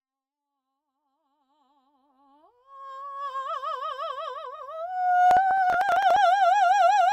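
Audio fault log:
5.31–6.16 s, processor overload crackle: across this stretch of the music the processor repeatedly fails to deliver its small audio buffers in time, and each late block is simply skipped, leaving a brief hole with hard edges. The holes are short, which fits buffers of around 5 ms, and roughly twenty of them fall close together, so they merge into a gritty tearing crackle over the sound that stops at 6.16 s once the load eases. The level ramps up smoothly from the start until 3.4 s.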